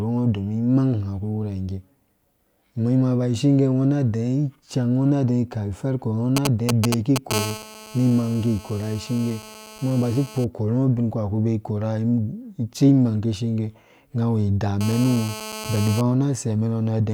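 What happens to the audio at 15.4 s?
At 15.4 s the speech is overlaid by GSM phone buzz, running from 14.81 to 16.01 s. A nearby 2G handset on a call transmits in bursts about 217 times a second, and the audio circuitry rectifies those radio pulses into the signal path. The result is a hard, raspy buzz at 217 Hz, rich in harmonics and unrelated to the speech. It holds steady across the span, sitting about 12 dB below the speech level.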